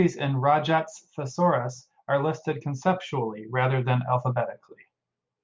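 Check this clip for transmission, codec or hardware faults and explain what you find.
No faults can be heard anywhere in this speech.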